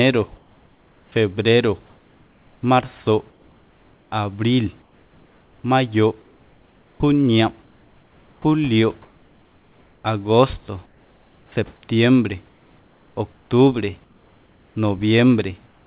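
A speech recording where the pauses carry comfort noise in place of the background, at 0.36–10.04 s, 10.86–11.52 s, 12.48–14.76 s and 15.66 s to the end. In each gap, the real room noise gives way to a steady, featureless hiss, about 4 dB quieter at 10.86 s and about 3 dB quieter at 15.66 s. This is likely discontinuous transmission, with the receiver synthesising noise while the sender stays silent. Nothing is heard above 4 kHz, which fits a narrowband G.711 call path.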